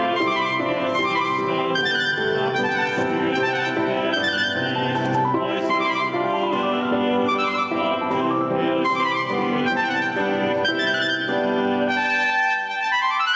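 Gain pumping runs through the whole clip: the gain swings by around 10 dB under each loud sound, likely from input gain set far too high feeding a fast limiter. The call path band-limits the audio, with nothing above 8 kHz, which fits G.722 at 64 kbps.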